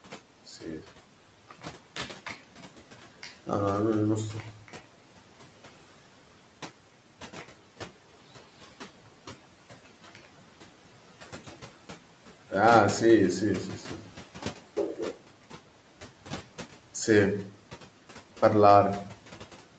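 A noise suppressor in the call chain works on the sound from start to finish, pulling down the bands it judges to be steady background noise, by about 11 dB. The room noise sits about 20 dB below the speech, in audio that stops at 8 kHz. With the noise level moved frame by frame, it drops away in the pauses and comes back up under the speech.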